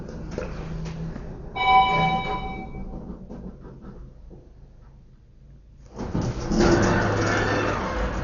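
Throughout, the sound is dull and cut off above 7 kHz, with rough, fluttering noise around tones. This is likely heavy Dolby Digital compression, fitting a bitrate near 48 kbps.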